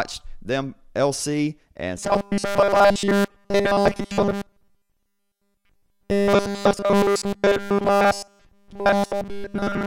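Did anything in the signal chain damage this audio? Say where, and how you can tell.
Yes. From 1.97 s to the end, speech becomes a fixed 200 Hz metallic buzz, robotic sound from repeated short buffers. A starved driver buffer likely loops 5 ms chunks, unlike wandering codec warble.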